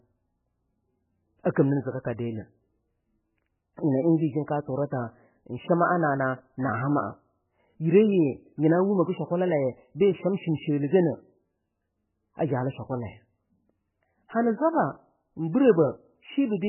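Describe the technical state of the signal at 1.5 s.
Pre-echo at 1.55 s: a brief hiss of about 15 ms runs ahead of a sharp attack. The codec spreads quantisation noise across its whole transform block, so noise sized for the loud onset leaks into the quiet instant before it, softening and smearing the attack.

MP3 compression damage is present here as throughout: heavy, watery, swirling artefacts, with nothing above 3 kHz, which points to a very low bitrate. The likely cause is an encoder starved of bits cutting the treble and switching weak frequency lines on and off between frames.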